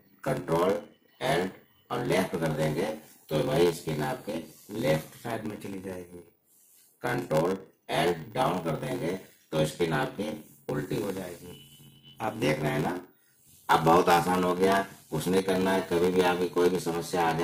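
Throughout, a block size mismatch (padded) ends each block in a short run of zeros, which fits a partly filled 512-sample read. This causes a steady 86.1 Hz buzz and 0.861 times speed at near-normal pitch. The waveform shows evenly spaced flat gaps, and the spectrogram shows regular vertical stripes.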